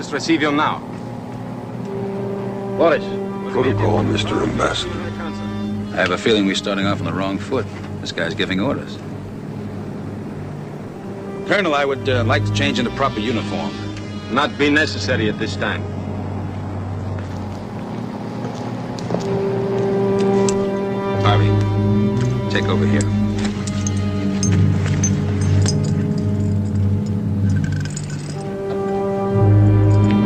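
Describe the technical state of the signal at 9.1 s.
At 9.1 s the signal is intact, with no audible fault at that point.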